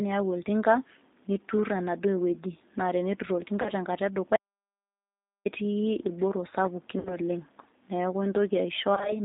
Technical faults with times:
0.00-9.24 G.729 codec
3.62-3.71 VoIP packet loss concealed by the speech codec
4.36-5.45 audio dropout to silence
6.99-7.17 VoIP packet loss concealed by the speech codec
8.95-9.16 VoIP packet loss concealed by the speech codec

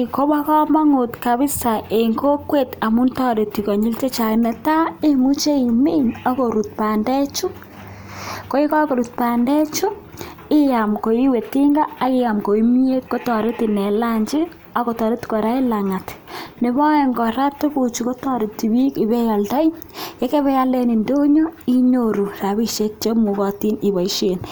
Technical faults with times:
none

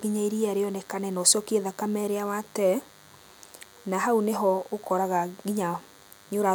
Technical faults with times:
0.00-6.54 DECT cordless phone buzz

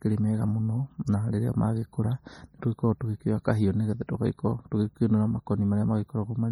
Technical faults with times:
0.00-6.51 MP3 compression

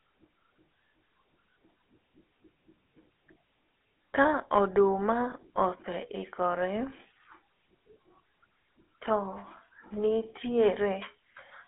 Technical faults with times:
0.00-11.68 GSM full-rate codec
5.30-5.34 lost GSM frames

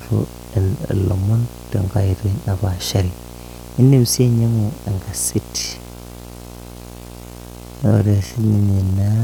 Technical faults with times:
0.00-9.24 video or display buzz
5.56-9.24 time-stretched section

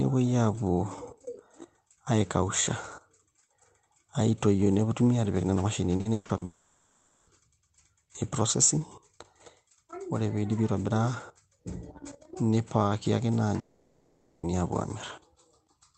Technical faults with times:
5.97-6.43 repeated packet loss (robotic sound)
6.45-7.29 long network dropout
13.59-14.45 long network dropout

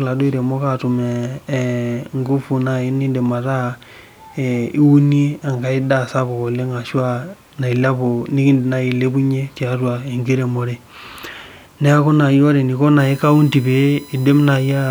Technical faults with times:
12.99-14.91 USB whine

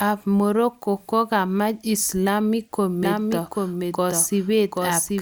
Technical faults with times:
3.03-5.21 doubled audio track

